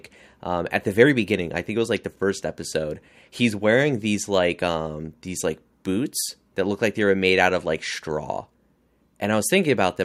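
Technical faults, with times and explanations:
No technical faults are audible.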